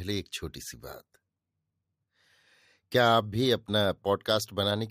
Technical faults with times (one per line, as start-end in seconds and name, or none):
none